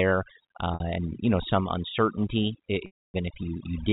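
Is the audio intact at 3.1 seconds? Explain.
No. At 3.1 s the sound sits inside a packet loss with pitch repetition gap running from 2.86 to 3.14 s, right after "you know some uncertainty". The receiver repeats the last pitch period, fades it out over roughly 50 ms, holds silence for the rest of the 280 ms gap, and cross-fades back in.

Overdone noise removal is also present at this moment, as it is throughout. Bands near the noise estimate are pulled far down, leaving near-silent background with twinkling specks.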